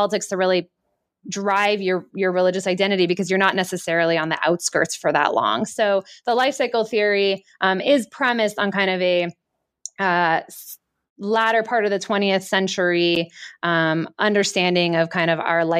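No technical faults can be heard.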